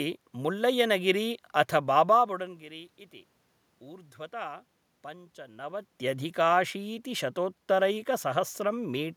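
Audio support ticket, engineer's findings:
No system fault found in the speech path. Room noise sits under the speech throughout, and the level shifts near 2 s and again around 5.5 s are the talker moved relative to the mic, not an equipment issue.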